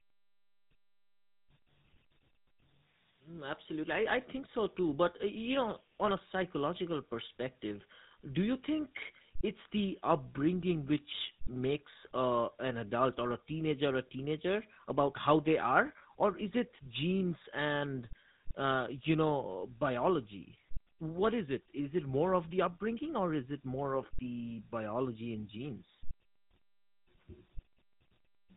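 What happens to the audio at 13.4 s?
At 13.4 s the speech carries tandem speech coding, present across the whole clip. It passed through G.726 at 40 kbit/s and then GSM full rate at 13 kbit/s, each coder reworking the previous one's errors, leaving rough, warbly, muffled speech with nothing above 3.8 kHz.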